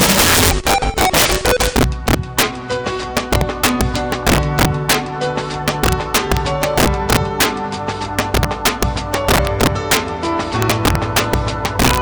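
Integer overflow runs throughout: with the signal pushed about 4 dB too hot, the roughly 3% of samples exceeding full scale wrap to the opposite sign, producing harsh cracks on loud moments.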